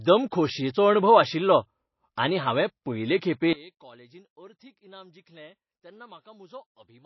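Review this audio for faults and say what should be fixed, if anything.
The whole clip has a watery, swirly quality, and nothing comes through above 5.8 kHz, so the speech sounds dull and the s sounds lose their edge. That's plainly audible codec damage, likely from MP3 encoding at a low bitrate, around 24 kbps. With that few bits the encoder drops weak frequency lines that flicker on and off between frames, and it cuts the top end entirely. To prevent it, keep the master lossless, or encode at a much higher bitrate.

Right after "आनी हांवें पयलें खेपे", at 3.53 s, the level falls by about 24 dB and stays down to the end of the clip. That drop points to one stereo channel with inverted polarity, likely folded down to mono at that point. Whatever both channels shared cancels out, background included, and only the small difference between them is left. To prevent it, check channel polarity, or use a correlation meter, before summing to mono.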